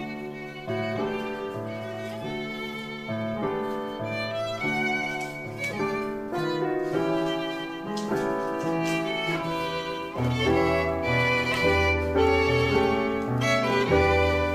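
From 0 to 10.19 s, channel delay (comb filtering): one channel lags by about 5 ms before mono summing, notching out evenly spaced frequencies from around 100 Hz upward, leaving a hollow, phasey tone.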